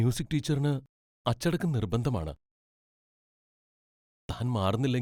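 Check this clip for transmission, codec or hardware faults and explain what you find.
One hardware fault is present. From 2.88 to 3.92 s, just after "ടീച്ചറിന് അച്ചടക്കം നിർബന്ധമാണ്", a system hang loop: the driver stalled, replaying one 40 ms buffer 26 times, producing a rattling buzz at 25 Hz.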